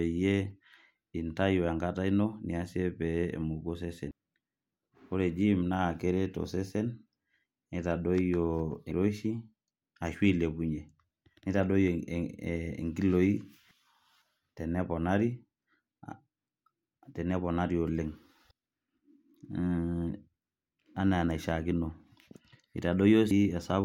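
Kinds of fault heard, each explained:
Audio missing between chunks: the speech jumps forward at 4.11, 8.91, 13.71, 18.51 and 23.31 s, losing about a fifth of a second each time, likely at handovers between 5 s chunks. Waveform and spectrogram show abrupt joins with no silent gap.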